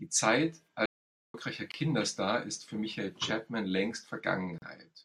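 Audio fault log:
0.86–1.34 s, playback stall: the speech halts for about 0.48 s and resumes where it left off, likely the player running short of data; far longer than a join gap.
1.72–1.74 s and 4.58–4.62 s, gap at a join of encoded pieces: brief silences of 25 and 38 ms with smeared edges, left by encoder delay and end padding where separately encoded pieces meet.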